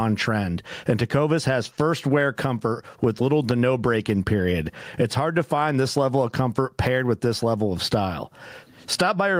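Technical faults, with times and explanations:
Throughout, gain pumping: the level of the speech swings by roughly 20 dB, being pushed down the moment a loud sound arrives, so loud and quiet passages sit unnaturally close together and the sound feels squashed. The likely cause is input gain set far too high, with a fast limiter or compressor clamping each peak.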